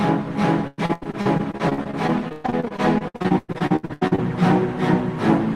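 From 0.67 s to 4.2 s the sound breaks up with repeated packet loss, which gives it a robotic quality. Dozens of short holes follow one another quickly. Each is patched by stretching the last bit of sound forward. About 38% of this stretch is filled that way, roughly 1.3 s in total, and the longest single gap is 118 ms. The result is choppy, with pieces missing.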